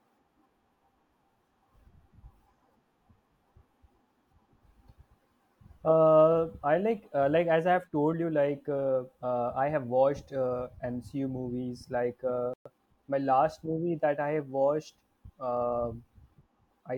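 At 12.54 s, right after "like uh", the speech cuts out abruptly for about 120 ms, until 12.66 s. This is a playback stall: the player most likely ran short of data or was briefly blocked, so nothing reached the output. On a waveform it shows as a flat, empty stretch with a hard edge where the signal stops; on a spectrogram it is a clean vertical gap across all frequencies before the speech resumes.

From 12.66 s to 13.14 s, leading into "my last", comes a time-compressed catch-up as the player works off the backlog from the stall. Small slices are dropped and the remaining pieces cross-faded, so the speech runs at 1.25 times normal speed while keeping its pitch, sounding hurried. A spectrogram shows the harmonic bands at unchanged heights but with syllables packed closer and slight discontinuities at the splice points.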